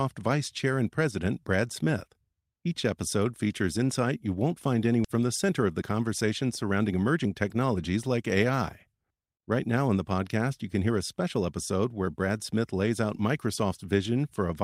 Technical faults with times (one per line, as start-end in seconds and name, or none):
5.04 skip ahead
5.14-7.75 jitter buffer speed-up